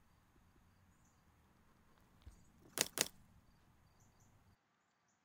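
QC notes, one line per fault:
0.52–0.72 s, 2.92–3.12 s and 4.12–4.32 s, overlapping chunks: at each of these joins the same 200 ms stretch of sound plays twice, producing a short stutter or click. The audio was handled in 1.0 s blocks, and each new block started 200 ms before the previous one had finished, so the overlapping portion came out a second time instead of being merged once.
4.55 s to the end, input switched to a poorer device: the sound turns duller and boxier with no gap at the change. Nothing is heard above 7.8 kHz, the level falls by a few dB, and a new noise floor sits roughly 30 dB under the signal. This is likely the capture moving to a narrower-band input such as a second microphone or a headset's call profile, which brings its own tone and noise.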